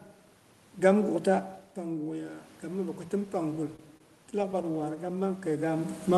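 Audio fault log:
1.76–6.0 s, automatic gain rising: the level drops about 9 dB, then the AGC slowly pulls it back up about 7 dB, so voice and room noise swell together.
3.76–4.97 s, repeated stalls (stutter): packets kept arriving late, so nine brief stalls got filled by stretching the last sound, up to 26 ms each. Nothing's lost, but it drags.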